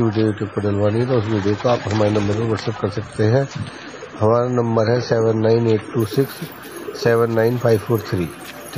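From the start to 6.0 s you're hearing an adaptive stream starting at a low bitrate. Nothing comes through above 9 kHz and the codec artefacts are thick, which fits roughly 24 kbit/s MP3. Then the player steps up, and it cleans up abruptly with no gap, consistent with 128 kbit/s.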